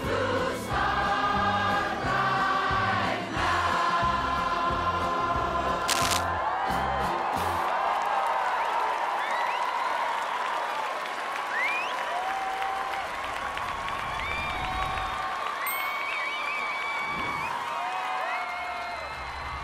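From about 5.82 s to 6.24 s there's a burst of cable scratch noise: dense, uneven crackle and rustle sitting right on top of the sound for just under half a second, at about the same level as the audio itself, so it's hard to miss. That ragged, sputtering texture is the signature of a worn cable, jack or pot being moved, with the contact resistance jumping around rapidly; that's the likely culprit here.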